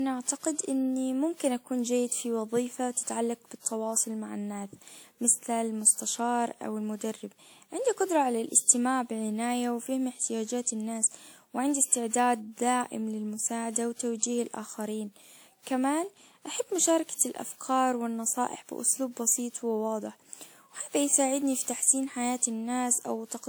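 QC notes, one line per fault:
Throughout, generation loss: the speech sounds swirly, hollow and smeared, with blurred consonant attacks. This likely comes from about seven successive lossy encodes, consistent with WMA at around 96 kbit/s. Each pass requantises on a shifted frame grid, compounding noise and spectral holes, though content still reaches about 20 kHz.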